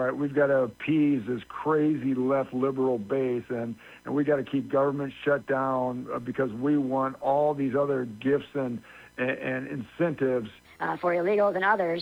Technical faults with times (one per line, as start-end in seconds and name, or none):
10.65-12.02 section at the wrong speed